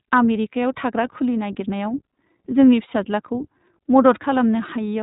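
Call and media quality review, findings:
Narrowband, slightly rough, synthetic speech for the whole clip; no content above 3.8 kHz. Likely iLBC codec, consistent with the 15.2 kbps, 20 ms frame mode. Each frame's excitation is coded independently, so plainly audible coding roughness remains.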